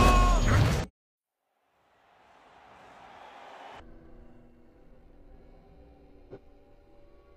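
Compressed frames skipped at 0.79–1.07 s, 3.77–3.83 s and 6.27–6.38 s: whole frames of the encoded audio never reach playback, so the sound jumps ahead by roughly 0.1 s, 0.3 s and 0.1 s respectively, leaving an audible seam at each join.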